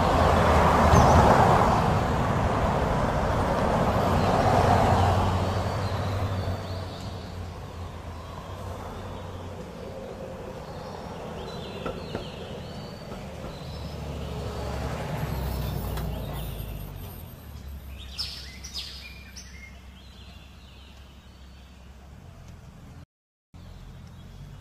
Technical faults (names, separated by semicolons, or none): rebuffering stall